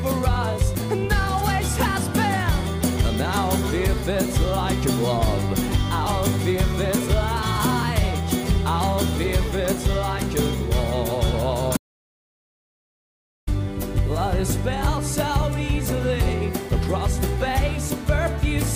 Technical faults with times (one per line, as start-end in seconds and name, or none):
11.77-13.47 audio dropout to silence